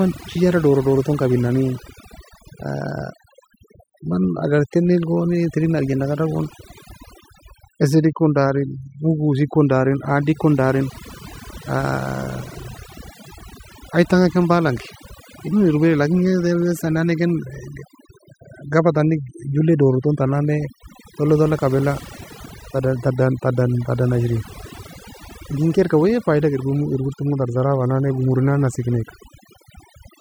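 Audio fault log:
Throughout, overdone noise removal: a noise reduction stage was pushed far too hard, so every frequency band it judged close to the noise floor was pulled down or shut off. The gaps between phrases drop to near silence flecked with brief twinkling specks, and the quieter parts of the speech are stripped away with the noise. Unlike a noise gate, which mutes everything at once, this removes separate bands independently.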